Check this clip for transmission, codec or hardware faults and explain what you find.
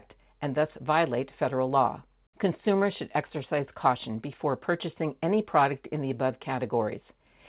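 No transmission, codec or hardware fault is audible in this speech; the band stops at 4 kHz, consistent with a G.711 mu-law call path at 64 kbps.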